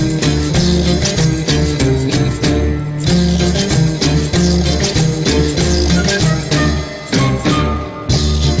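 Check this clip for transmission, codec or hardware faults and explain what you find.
Nothing stood out on listening; the audio comes through a call path whose coding leaves nothing above about 8 kHz, and nothing further drew attention.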